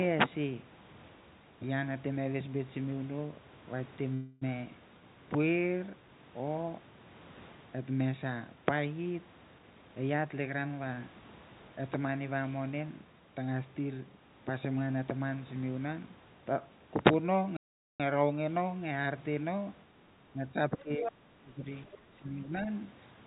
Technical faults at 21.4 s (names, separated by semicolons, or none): speech suppressed in double talk